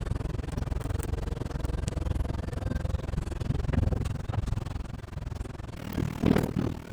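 Overlap-add ripple runs through the whole clip. The audio was framed, windowed and rejoined with overlaps that do not sum to a steady gain. The level swings by about 60 dB around twenty times a second. It sounds like a harsh, robotic flutter.

From 5.76 s to the end, a section plays at the wrong speed, 1.81 times too fast. Pitch jumps up by close to ten semitones and the sound turns shrill and hurried. This is likely playback against a mismatched clock.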